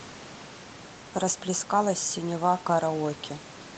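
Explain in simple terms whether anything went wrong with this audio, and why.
Nothing went wrong with this speech recording: the call's microphone processing has trimmed the deepest bass and left nothing above 8 kHz, which is expected, and the faint room noise sits well below the speech.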